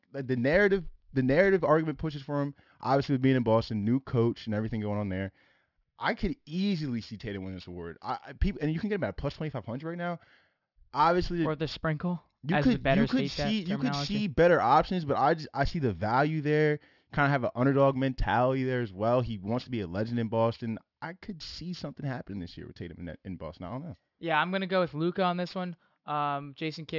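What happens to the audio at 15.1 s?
At 15.1 s the speech carries aliasing, present throughout the clip. A downsample that points to 12 kHz, done without filtering, folds everything above 6 kHz back down, so sibilants turn gritty and metallic. On a spectrogram, energy runs hard up to 6 kHz, with mirrored streaks roughly 25 dB below the speech.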